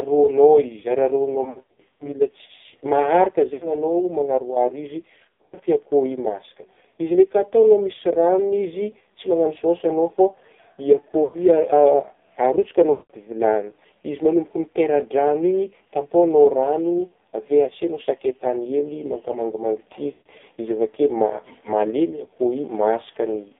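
From start to finish the speech passes through the AMR narrowband mobile codec, heavily damaged, with a buzzy, synthetic edge that fits a low mode near 5.9 kbps. A spectrogram shows a hard band from about 200 Hz to 3.6 kHz with nothing above, and smeared, blocky harmonics where the vocal tract model is stretched thin.

Lost AMR speech frames break in six times. At 1.44 to 2.13 s the gaps are scattered, with runs up to 100 ms, about 320 ms lost in all. Shorter losses follow at 3.54 to 3.73 s, 5.30 to 5.61 s, 11.24 to 11.39 s, 12.92 to 13.14 s just before "vilagny izy", and 20.12 to 20.29 s. Each time the decoder repeats its last pitch and spectral shape at falling gain, so the sound smears into a brief warble or sags toward silence, then returns rough. On a waveform these are sudden envelope dips. The spectrogram shows frozen, fading harmonic bands.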